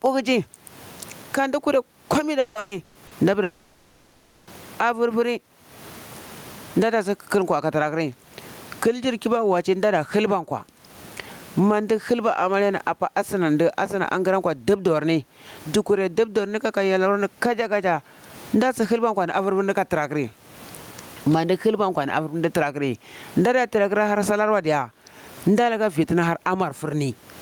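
Throughout the speech, the gain pumps with a swing of roughly 25 dB. That is gain pumping, most likely from input gain set far too high with a fast limiter clamping down on every peak, which squashes loud and soft parts together. The room noise sits about 45 dB below the speech.

From 2.39 to 3.14 s there is repeated packet loss, giving choppy, robotic sound. Four gaps open over this span, the longest 160 ms, and each is patched by stretching the preceding sound. About 440 ms is filled this way, some 59% of the stretch, so pieces of the speech are missing.

From 3.43 to 4.50 s comes a long network dropout, the likely cause of the 1.04 s of lost audio. The whole gap is covered by concealment continuing the last sound as a fading buzz or hiss rather than falling silent. The speech then resumes without the lost portion.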